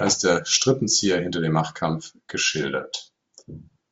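Nothing stood out on listening to this speech recording.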